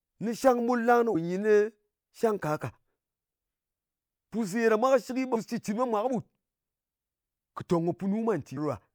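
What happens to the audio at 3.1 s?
Nothing goes wrong at 3.1 s: the speech carries on intact through that moment, with no dropout, click, distortion or other fault.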